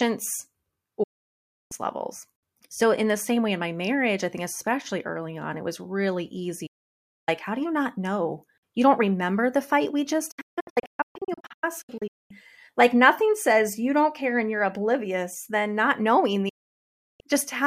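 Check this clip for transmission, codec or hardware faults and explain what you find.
Four digital broadcast dropouts interrupt the speech. The receiver loses or rejects frames and mutes until clean ones return, at 1.03–1.72, 6.66–7.29 and 16.49–17.21 s. From 10.31 to 12.31 s it cuts out repeatedly in short holes, the longest 0.22 s. Each cut fades within about 8 ms, so the waveform drops to a flat line and the spectrogram shows sharp-edged blank columns. The speech sent during each gap is lost.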